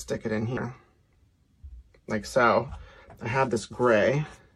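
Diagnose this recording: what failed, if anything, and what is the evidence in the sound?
The failure sits in the codec stage: damaged data in a compressed stream. Two brief glitches break the sound at 0.56 s and 3.02 s, each lasting only about 10 ms. Corrupted bytes reached the decoder there; it misread the affected frames, lost frame sync and recovered at the next valid header. These are decoder errors rather than a simple dropout or an analogue or buffer click.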